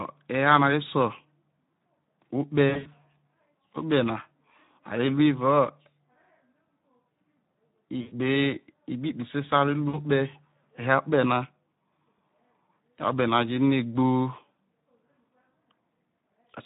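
Speex codec damage runs through the whole clip. The coding is plainly audible: the speech sounds hoarse and grainy because this CELP coder has too few bits to rebuild the excitation signal faithfully. The level of damage fits a Speex setting around 11 kbps. Any content above 4 kHz comes across as shaped hiss rather than real detail.

VoIP packet loss concealed by the speech codec first occurs from 2.70 to 2.89 s. About 120 ms of audio went missing, spread in pieces across 160 ms, with the longest single gap lasting 60 ms. In each gap the decoder continued from its last pitch and filter state at falling gain, so the sound is stretched out and fades away. The same fault returns at 8.01 to 8.13 s, with about 100 ms missing, and at 9.89 to 9.98 s, with about 40 ms missing. Each time the speech stays weak and distorted for a short while after the audio resumes, because the decoder has to rebuild its internal state.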